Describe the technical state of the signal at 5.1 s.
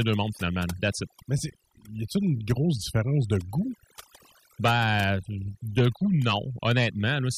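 At 5.1 s the speech carries overdone noise removal, present across the whole clip. The noise reduction is set too strong. Frequency bands near the noise floor get pulled down or gated out. The background drops and breaks up into twinkling specks.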